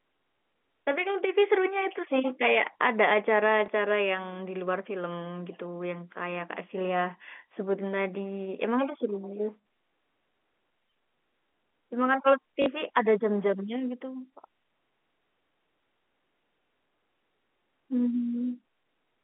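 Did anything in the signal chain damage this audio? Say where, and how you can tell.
Yes, in the network stage: packet loss with last packet repeated at 3.66–3.68 s and 12.62–12.66 s. The single repeated packet at 3.66 s gives a small blip, and the two-packet run at 12.62 s a short buzzy stutter, not a silent dropout.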